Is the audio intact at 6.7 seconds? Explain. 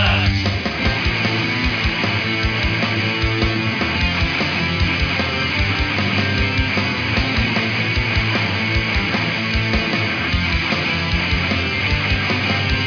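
Yes, the audio at 6.7 seconds is intact, with no dropout, click, distortion or other fault at that moment.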